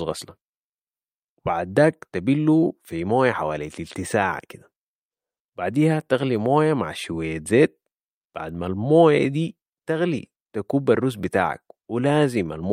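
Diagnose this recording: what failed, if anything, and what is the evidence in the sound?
Nothing in the speech points to a failure at any stage between capture and playback.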